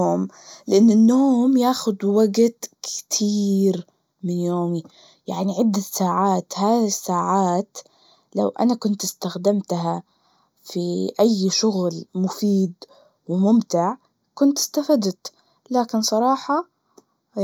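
From start to finish, one channel of the speech arrives roughly a fifth of a millisecond behind the other, and when the two are summed to mono this channel delay causes comb filtering. Components shared by both channels cancel at evenly spaced frequencies, with the first deep notch at around 3 kHz and further notches repeating higher up. The voice sounds hollow and phasey, with a dulled, recessed presence region that stays fixed for the whole clip.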